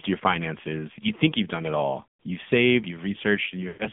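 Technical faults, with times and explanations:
Throughout: AMR narrowband mobile codec. The sound is confined to roughly 150 Hz to 3.5 kHz, and at a buzzy, synthetic quality that fits the 7.4 kbps AMR-NB mode, the coder rebuilds speech from a vocal-tract model and sparse pulses. The damage is plainly audible.
3.68 to 3.87 s: lost AMR speech frames. About 120 ms of speech fails to arrive, which fits six consecutive 20 ms frames. The decoder repeats the last good pitch and spectral settings at falling gain, so the sound smears and fades toward silence before recovering near the end.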